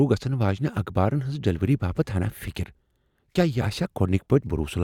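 At 2.48 s there's a single sharp click, likely dropped samples: a fraction of a millisecond goes missing, so the waveform jumps straight to a later value.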